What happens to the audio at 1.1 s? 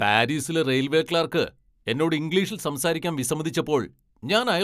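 Nothing goes wrong at 1.1 s: the speech there plays through intact, with no dropout, click, distortion or other audible fault at that point.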